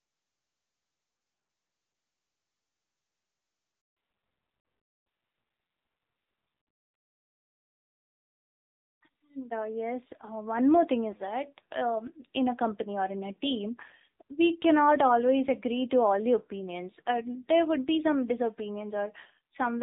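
Handover gap, 3.81 to 3.97 s: the call switched networks and no speech frames arrived for 160 ms. The sound collapses within a few tens of milliseconds into dead silence, and whatever was said across that stretch is simply gone.

Fallback to narrowband, from 3.97 s to the end: once the new link starts, the call no longer carries HD Voice and drops to an older narrowband codec. Before the gap, the clear wideband sound points to AMR-WB at around 23.85 kbit/s. Afterwards, nothing above 4 kHz survives, and the speech sounds duller and rougher, consistent with AMR-NB at roughly 7.4 kbit/s.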